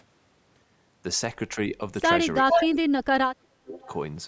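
From 2.42 to 3.84 s the speech ducks hard, dropping something like 35 dB at its deepest, likely speech suppressed in double talk. Both ends overlapped and the canceller clamped down. Inside that, at 2.49 to 2.69 s, an echo leak comes back about 0.41 s late and roughly as loud as the speech. A much fainter leak follows at 3.84 to 3.89 s.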